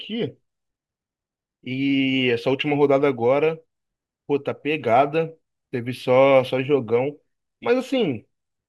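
No technical faults are audible.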